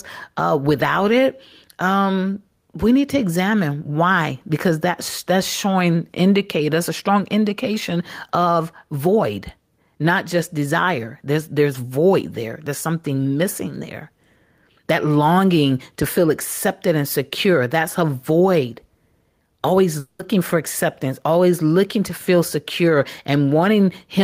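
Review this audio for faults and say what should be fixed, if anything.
Gain pumping runs through the whole clip. The gain ducks by around 5 dB under each loud syllable. That most likely comes from the input gain being set far too high, so that a fast limiter keeps pulling it down. Unlike a noise gate, it never cuts the background out entirely; the background rises and falls smoothly. Lower the microphone gain so the limiter rarely acts.

A long network dropout occurs from 19.99 to 20.22 s, just before "for acceptance always looking". About 0.2 s of speech is lost and replaced by a fading buzz or hiss continuing the last sound, likely caused by a stretch of audio that never arrived. Unlike a brief packet loss heard as a click, this gap lasts about 0.2 s. Use a more stable connection or a larger jitter buffer.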